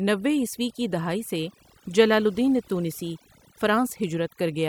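Throughout the speech, overdone noise removal pulls individual frequency bands near the noise estimate down or off, taking quiet vocal detail with them. The result is speech over near-silent, twinkling specks, unlike a noise gate, which mutes everything at once.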